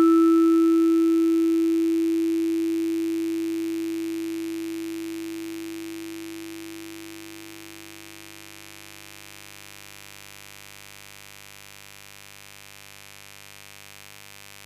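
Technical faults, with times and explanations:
Throughout, mains buzz: a raspy 50 Hz buzz sits under the music for the whole clip, roughly 20 dB down. Sharp interference spikes land twice per mains cycle, and their harmonics climb into the kilohertz range, which gives it that gritty edge.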